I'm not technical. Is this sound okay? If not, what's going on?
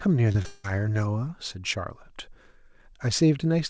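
No, there's a rough patch right near the start, all within the first second or so.

First come two short concealed packet losses, at about 0.32 to 0.36 s and again at 0.42 to 0.46 s. In each, a tiny slice of the call, roughly 20 ms, didn't arrive in time, so the receiver patched the hole by stretching out the sound just before it. You hear a quick smear or little wobble rather than a clean gap, and a short sound could get swallowed.

Straight after that, from about 0.46 to 0.66 s, the sound turns into a stretched-out buzzy or hissy continuation of the last bit of sound, fading but never going fully silent, and then the real audio picks up again further along. That's most likely a long network dropout: for nearly a fifth of a second nothing came through, and the receiver filled most of that stretch with that made-up continuation, so the original sound from that moment is simply gone.

The call connection itself is working as normal, though it cuts everything above 8 kHz, so the top end sounds a bit dull.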